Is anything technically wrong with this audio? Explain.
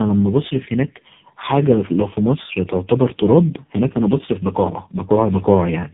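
Yes. Tandem speech coding, throughout: the speech was decoded and re-encoded through three speech codecs in a row, ending in AMR-NB, leaving it rough, warbly and muffled, with nothing above 3.8 kHz.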